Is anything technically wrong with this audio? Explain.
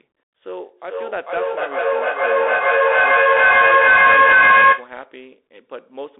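Yes, two problems. Throughout, there's a Bluetooth CVSD headset codec sound. The band sits at about 300 Hz to 3.6 kHz, with nothing above 3.8 kHz, which fits a 64 kbit/s CVSD link. Its one-bit, adaptive-step coding leaves plainly audible damage: scratchy s sounds and a granular hiss under the speech.

From 0.49 to 4.98 s there's feedback echo between two devices. A second device on the same call replays this microphone's audio into the room, and it gets picked up again. Repeats come back roughly every 400 ms, peaking at about 16 dB above the speech.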